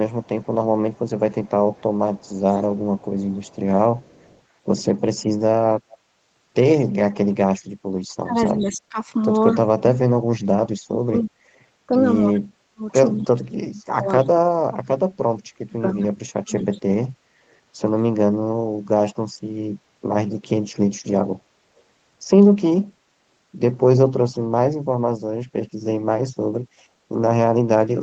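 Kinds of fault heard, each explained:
Echo leak: from 0.23 to 4.41 s, and again at 5.90 to 5.98 s, 8.62 to 9.55 s, 12.35 to 13.26 s and 16.59 to 16.79 s, a faint copy of the speech trails the original by 243 ms. It sits about 30 dB below the direct sound at first and rises to about 20 dB below later. It is likely the far end's loudspeaker feeding its microphone, with the echo canceller failing to remove that pickup before sending it back.
Speech suppressed in double talk: between 8.23 and 16.71 s, while the other party is also talking, the speech repeatedly dips and breaks up, for roughly five seconds in total, falling by as much as about 40 dB at its deepest. This is likely an echo canceller unable to tell its own talker from returning loudspeaker echo, so it turns both down together and cuts into the speech it should pass.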